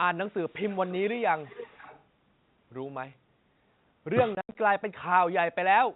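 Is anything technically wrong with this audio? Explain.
Yes. This speech clip carries three kinds of fault on top of narrowband telephone coding.

From 0.28 to 0.95 s and again from 1.4 to 2.03 s there is an echo leak, a faint delayed copy of the speech trailing it by 410 ms. It sits roughly 25 dB down in the first stretch and about 20 dB down in the second. This is likely far-end echo that the other side's loudspeaker-and-microphone path let through because its echo canceller did not fully remove it. On a spectrogram the harmonic pattern of the speech repeats faintly, shifted right by 410 ms. In the waveform it shows as a low-level smear filling what would otherwise be gaps.

Between 4.35 and 4.55 s, packet loss filled with silence punches holes into the speech. About 120 ms of audio is missing, scattered across that 200 ms span, and the longest hole is 80 ms, which fits 10 ms packets. 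The receiver had nothing to play and substituted silence. The waveform drops abruptly to a flat line with square edges, and the spectrogram shows clean vertical white bars.

Speech suppressed in double talk follows at 4.72 to 4.97 s, 5.15 to 5.35 s and 5.79 to 5.94 s. The level dips by roughly 25 dB in the first two and by about 30 dB in the last, affecting around 150, 70 and 150 ms. The likely cause is that both sides spoke at once and the echo canceller attenuated the near talker along with the echo. The waveform envelope sags or pinches in these places. On a spectrogram the energy fades rather than stopping in sharp bars.

The G.711 A-law coding passes only up to 4 kHz. It leaves at most a faint level-tracking hiss, so the spectrogram is empty above that line.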